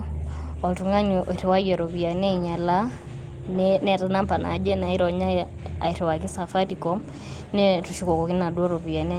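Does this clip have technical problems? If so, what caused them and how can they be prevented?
Yes. Lost packets rebuilt from error correction occur at 0.51–0.53 s, just before "oltung'ani oiriwayie iropiani ainyalaa", and at 3.51–3.57 s. Low-bitrate backup copies carried in following packets filled 20 ms and 40 ms, so there's no gap, but those moments sound rougher and noisier. To prevent this, reduce packet loss on the network path, for example with a wired connection or less congestion.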